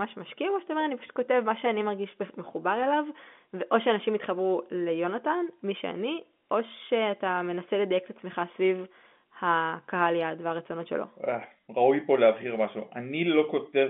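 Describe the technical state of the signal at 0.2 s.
At 0.2 s the speech is intact, carrying only the narrow 200 Hz to 3.5 kHz band of its G.711 telephone coding with no dropout, click or distortion at that moment.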